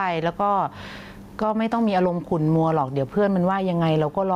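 Gain pumping runs the whole way through this speech: the level swings by about 10 dB as the talking stops and comes back in. The likely cause is input gain set far too high, with a fast limiter clamping down on each loud bit, so everything sounds squashed and flat.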